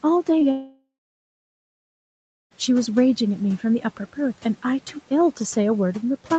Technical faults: short concealed packet loss; long network dropout

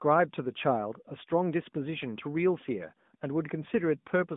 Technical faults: AMR narrowband mobile codec

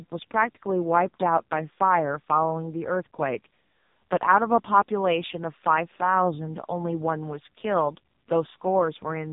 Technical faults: AMR narrowband mobile codec

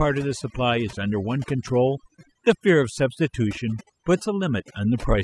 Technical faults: overdone noise removal; electrical switching spike

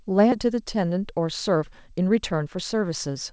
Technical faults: skip ahead; jitter buffer speed-up

